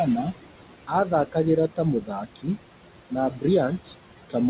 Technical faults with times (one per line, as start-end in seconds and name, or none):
0.00-4.50 noise suppressor artifacts
0.87-1.36 speech cut by the noise suppressor
2.01-2.48 speech cut by the noise suppressor
3.10-3.44 speech cut by the noise suppressor